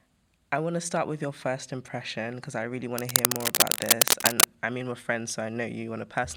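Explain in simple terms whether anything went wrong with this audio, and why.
From 2.98 to 4.44 s, after "impression because I really" and before "I mean we're friends", cable scratch noise, likely a worn cable or connector being moved, makes an uneven rustling louder than the speech, unlike separate clicks.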